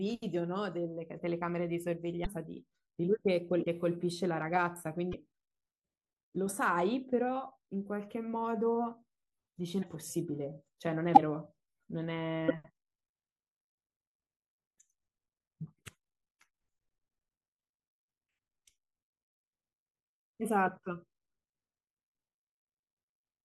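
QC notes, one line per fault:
2.24–2.27, 3.62–3.65, 5.11–5.14, 9.81–9.84, 11.14–11.18 and 12.48–12.51 s: broken MP3 bit reservoir, brief 30–32 ms disruptions, about one 26.1 ms frame each, likely from frames decoding against another frame's borrowed bytes after a cut.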